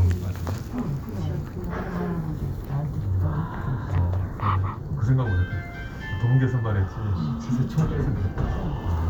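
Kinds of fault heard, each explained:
No technical faults can be heard in this audio.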